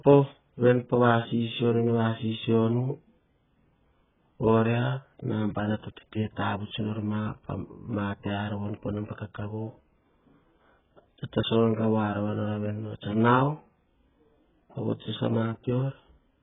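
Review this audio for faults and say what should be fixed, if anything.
Heavy AAC compression damage runs through the whole recording: there is nothing above 3.8 kHz, so the speech is dull and band-limited, and what remains has a smeared, warbling texture with fizzy sibilants. The likely cause is AAC-LC at a very low bitrate. The sound points to something around 8 kbps, where the encoder drops the upper spectrum and starves the remaining bands of bits, leaving audible quantisation noise. To prevent it, source an uncompressed copy or encode at a substantially higher bitrate.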